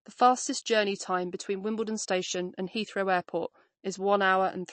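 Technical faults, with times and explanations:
Throughout: MP3 compression. The speech has nothing above about 8.3 kHz, and the damage is plainly audible: s sounds turn watery and swirly, with a metallic chirp, and consonant attacks smear. This is likely a starved MP3 encoder, which cut the treble and switched weak frequency components on and off from frame to frame. The bit budget points to about 36 kbps. A simple low-pass filter would dull the sound without this shifting, bubbling texture.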